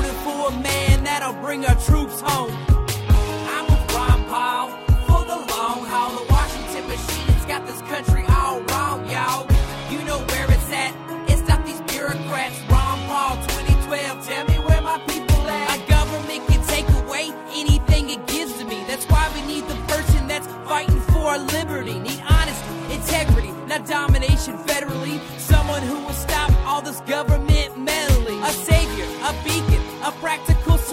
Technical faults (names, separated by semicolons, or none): repeated buffer